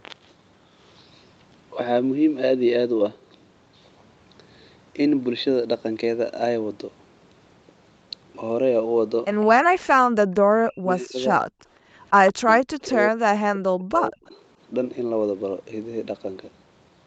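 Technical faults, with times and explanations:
10.6 to 11.18 s, speech suppressed in double talk: the speech dips sharply, by around 40 dB at its deepest, and breaks up for about half a second. This is likely an echo canceller mistaking the talker for loudspeaker echo while both sides spoke. Unlike gating, the speech itself is chewed.
11.47 to 11.93 s, background gated by the echo canceller: the room sound drops, by about 40 dB, for roughly 0.4 s, then returns. The canceller clamped the microphone while the loudspeaker played.
12.31 to 14.34 s, speech suppressed in double talk: the same choppy dips recur across two seconds, totalling around 1.5 s of attenuation reaching roughly 40 dB. The speech loses level in fragments rather than as one clean gap.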